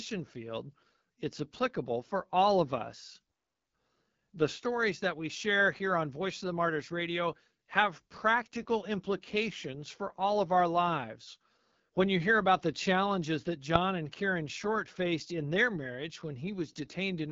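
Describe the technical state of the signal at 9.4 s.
At 9.4 s the speech carries AMR wideband (HD Voice) codec damage, which runs through the whole clip rather than starting or stopping here. The encoder models the voice as a pulse-excited vocal tract up to 6.4 kHz and fills the band above with shaped noise; nothing reaches past about 7.6 kHz. The coarse excitation is plainly audible as a rough, raspy texture, which points to one of the codec's lowest modes, around 8.85 kbit/s.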